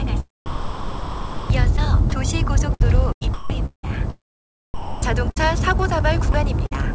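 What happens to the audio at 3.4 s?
At 3.4 s the audio sits inside a stretch from 2.74 to 3.89 s of sound chopped by the voice detector. Gating likely switched transmission off and on, swapping about 0.49 s of real sound for comfort noise, so it stutters. Spectrogram: structured content alternates with smooth, featureless noise bands.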